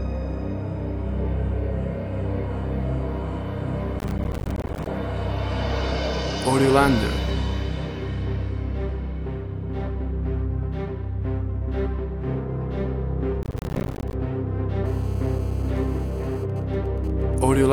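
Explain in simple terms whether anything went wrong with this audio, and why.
The computer handling the audio fell behind twice. It works through the sound in very short chunks, around a hundredth of a second each, and each chunk has a deadline. From 3.99 to 4.87 s and again from 13.43 to 14.13 s it missed dozens of those deadlines in a row, leaving tiny silent holes with sharp edges. That is processor overload crackle: a gritty, tearing crackle over the sound that stops once the computer catches up.

A 2G mobile phone on a call was close to the audio equipment. Such a phone sends its radio signal in rapid pulses, about 217 times a second, and the audio circuit picked those pulses up as if they were sound. This GSM phone buzz runs from 14.86 to 16.44 s as a harsh, raspy, steady buzz that has nothing to do with the recording itself.

From 16.50 to 17.58 s a phone was on a call, but its user had gone quiet, so it sent only occasional short groups of radio pulses instead of a steady stream. 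Those GSM signalling bursts come through as even ticks with a longer buzz twice a second, at that same 217-per-second rate, stopping and starting rather than holding steady.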